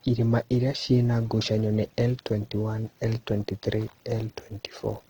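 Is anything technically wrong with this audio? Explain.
Yes. Throughout the speech the sound is grainy and rough, with a noisy, hashy texture on voiced tones, while the bandwidth still extends to about 20.3 kHz. This is likely Opus compression in its music (CELT) mode at a low bitrate, which fits roughly 16 kbps. With too few bits, the encoder keeps each band's energy but fills its detail with folded or noise content, so harmonics come out coarse rather than clean.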